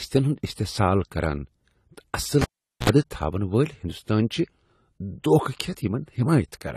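A speech recording with a dull, smeared top end, where nothing reaches above about 14.1 kHz and the swirly, watery artefacts of heavy compression remain. The likely cause is low-bitrate audio saved at a high bitrate: the file is MP3, but the damage points to an earlier low-rate encode, around 32 kbit/s AAC, re-saved near 320 kbit/s, which cannot bring back what was discarded. At 2.41 s a pop cuts the sound to near silence for about 0.43 s, which includes a 64 ms burst of 60 Hz mains buzz, and a second pop follows as it returns at 2.90 s, the signature of a cable pulled and plugged in while live, with the buzz coming from the plug tip touching before it seated.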